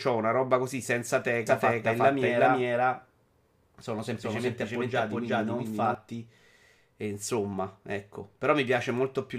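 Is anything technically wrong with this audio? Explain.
Yes. From 1.47 to 5.95 s, just after "una roba così senza", a doubled audio track appears: a second, equally loud copy of the speech trails about four tenths of a second behind, dry and full-band, starting and stopping abruptly. It is likely a second capture through a slower path.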